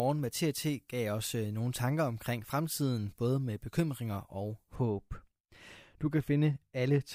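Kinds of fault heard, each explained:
Pre-emphasis left on: For the first 4.76 s the speech sounds thin, bright and hissy, with sibilants spitting and the upper treble standing well forward of the body of the sound, about 13 dB stronger at 10 kHz than at 1 kHz. The treble was lifted for transmission along a curve matching the 75 µs FM standard, and the complementary de-emphasis that should restore the balance was never applied.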